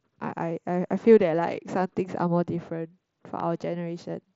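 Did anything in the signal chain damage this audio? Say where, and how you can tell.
Yes. At about 3.40 to 3.42 s a single loud pop, peaking a few dB above the speech, sits on top of the signal while the speech continues underneath. That points to a loud pop, likely a voltage transient from a plug or switch in the analogue wiring, shaped by the circuits downstream. A buffer dropout or codec glitch would gap or smear the speech instead.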